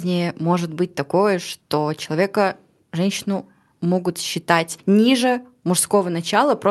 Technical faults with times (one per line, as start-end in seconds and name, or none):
none